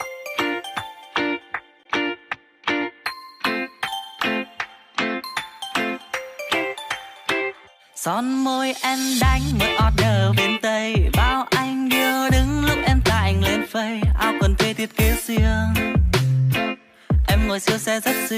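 No technical faults can be heard anywhere in this recording.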